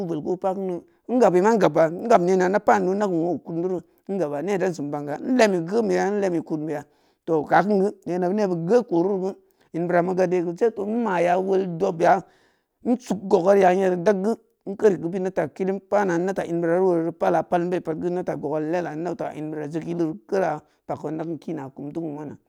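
No audible technical faults.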